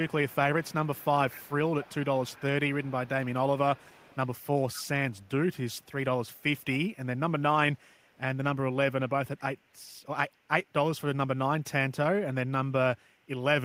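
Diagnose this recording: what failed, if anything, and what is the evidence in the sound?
Call processing failed here, in the form of an echo leak: a faint delayed copy of the speech trails it by about 238 ms in five stretches, 0.02–3.34 s, 3.76–5.92 s, 6.25–6.97 s, 7.75–8.19 s and 9.37–9.73 s. It sits well below the speech through 6.97 s and becomes fainter still later. The likely cause is a far-end echo canceller letting loudspeaker pickup through. The fixed, distinct lag and the gaps separate it from room reverberation, which would smear continuously.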